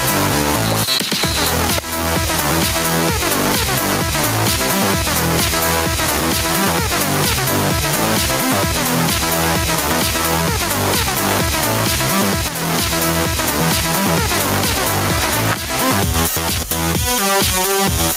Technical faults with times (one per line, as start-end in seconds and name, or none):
1.78 electrical switching spike
12.48 electrical switching spike
15.52-15.54 electrical switching spike